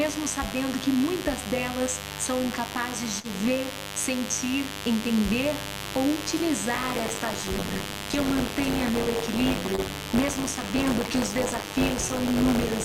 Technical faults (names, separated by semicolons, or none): mains buzz; short concealed packet loss; buffer tearing